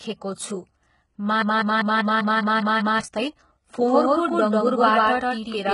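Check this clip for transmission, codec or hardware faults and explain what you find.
Three faults are audible in this speech clip.

Throughout, the treble sounds heavily damaged and synthetic, with nothing above 11.1 kHz. This is likely HE-AAC compression at a very low bitrate, around 12 kbps, which rebuilds the highs by copying lower bands upward.

From 1.42 to 3.01 s, a 197 ms fragment repeats back to back eight times. This is a broken-record loop, likely from a stall that kept resending the last held piece, so the audio that should have played is lost.

From 3.87 s to the end, a second full-band copy of the speech starts abruptly, about as loud as the original and roughly 150 ms behind it. This is likely a doubled audio track mixed in twice.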